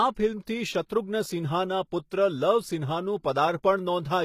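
Throughout, the speech's treble sounds bright but synthetic, with gritty, lispy s sounds and nothing above 14.9 kHz. That points to likely HE-AAC compression near 20 kbps rebuilding copied highs, not a plain low-pass.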